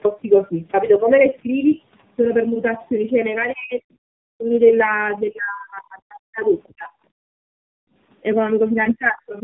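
Across the whole clip the speech sounds rough, muffled and warbly, with nothing above about 3.7 kHz. That is tandem speech coding: the signal was decoded and re-encoded by two different low-rate speech coders in sequence, each working on the already damaged output of the one before, so their artefacts stack. The character fits an iLBC stage followed by an AMR-NB stage, with a G.711 link between them.

From 3.52 to 4.52 s the speech sags and partly vanishes, with dips of around 40 dB covering roughly 0.7 s. The same thing happens from 5.3 to 6.45 s, over about a second in total. These are likely speech suppressed in double talk: while the far end was also talking, the echo canceller could not tell the local talker from loudspeaker echo and turned everything down.

Between 6.63 and 6.73 s a brief, very faint second voice slips in, some 35 dB below the main speech. This is likely the other side's voice leaking through, an echo residue the canceller failed to remove from the microphone signal.

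Immediately afterwards, from 6.74 to 6.91 s, the speech is gated down again for about 150 ms. It happens once more from 8.72 s to the end at 9.43 s, over about half a second. These are likely further instances of the same double-talk suppression.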